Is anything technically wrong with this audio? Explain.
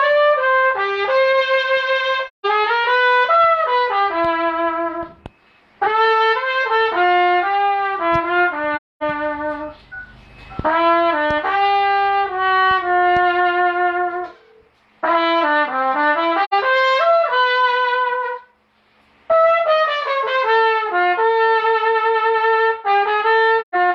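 Yes. AAC frame loss with muting occurs four times: 2.27–2.46 s, 8.76–9.03 s, 16.44–16.53 s and 23.61–23.75 s, removing about 171, 256, 85 and 128 ms of sound. When compressed frames go missing, the decoder fills their spectrum with zeros. Because AAC frames overlap, the surrounding windows taper the audio down into silence and back up again over roughly a frame's length. Each dropout is heard as a brief gap with softened edges.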